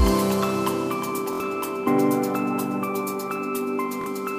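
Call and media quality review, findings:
Bluetooth stutter at 1.33–1.40 s (about 70 ms lost) and 4.01–4.06 s (about 46 ms). BT link dropping packets; receiver loops its last buffer, then skips ahead.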